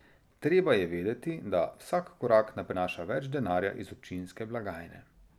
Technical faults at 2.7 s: CD skip

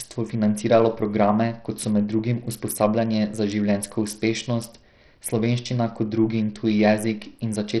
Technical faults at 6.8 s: Bluetooth SBC compression

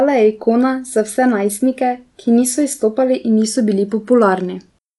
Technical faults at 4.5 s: Dolby Digital compression

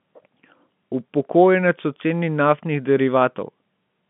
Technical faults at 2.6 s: none

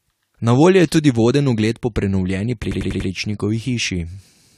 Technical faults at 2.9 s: repeated frames

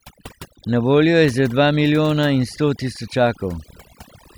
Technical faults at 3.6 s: overdone noise removal

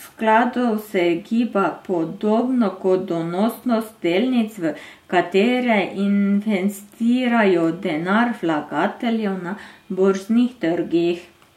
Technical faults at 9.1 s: none

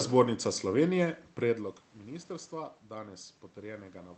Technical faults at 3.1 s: none

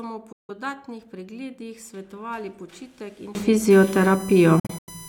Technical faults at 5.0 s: USB whine

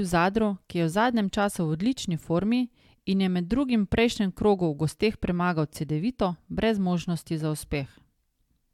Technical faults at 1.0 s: none

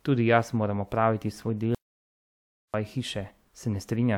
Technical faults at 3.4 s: none

